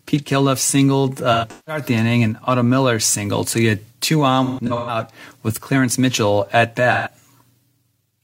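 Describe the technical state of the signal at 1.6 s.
At 1.6 s you're inside a stretch of AAC frame loss with concealment running from 1.33 to 1.83 s. About 256 ms of audio went missing in scattered gaps, the longest around 150 ms, and the decoder papered over them by reusing the last good spectrum, so it comes out smeared and phasey.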